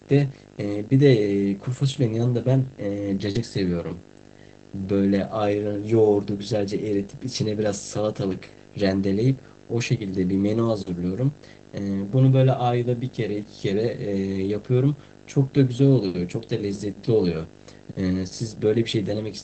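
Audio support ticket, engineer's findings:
Video or display buzz, whole clip: 50 Hz buzz with hash above it plus a 15.6 kHz line-rate whine, roughly 15 dB under the speech. Screen or video cable coupling into audio. The line-rate tone separates it from plain mains hum.

Short concealed packet loss, 3.31–3.37 s: brief smeared wobble where about 35 ms of missing audio was filled by extending the preceding sound, then crossfaded back. Audio that never arrived was synthesised from pitch/noise, unlike the error-correction rebuild, which recovers real content.

Lost packet rebuilt from error correction, 3.35–3.41 s (40 ms) and 16.67–16.77 s (60 ms): no gap, but a rougher, noisier patch, consistent with two and three packets recovered from Opus in-band FEC copies. These are low-bitrate versions of the actual audio, not an extrapolated smear. The roughness sits on top of the Opus call path's roughly 8 kHz band limit.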